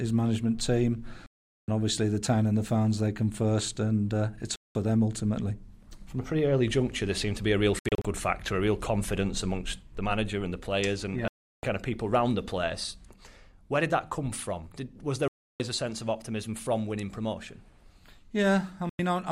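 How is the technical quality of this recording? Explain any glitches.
The technical quality is compromised by six digital broadcast dropouts, at 1.26–1.68 s, 4.56–4.75 s, 7.79–8.05 s, 11.28–11.64 s, 15.28–15.60 s and 18.90–19.00 s. Each time the receiver loses valid frames, it mutes until good data returns, so the sound cuts to silence and resumes further along. The missing material is simply gone. Around 7.79 s the loss breaks into several short holes, none longer than about 64 ms. The gap lengths fit whole frames of roughly 32 ms, which marks this as muting in a digital receiver rather than an analogue fade. No hiss or noise rises to fill the gaps, only clean silence.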